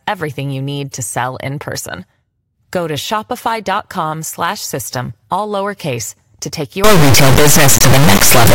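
Integer read as float, from 6.84 s to the end at 8.54 s, just after "all lowercase to take". Here the 32-bit integer samples are interpreted as 32-bit floats, so each bit pattern turns into a meaningless number, either vanishingly small or enormously beyond full scale. The output snaps between silence and the clipping ceiling, and the speech gives way to a harsh, extremely loud square-wave buzz that drops out to silence wherever the signal gets very quiet.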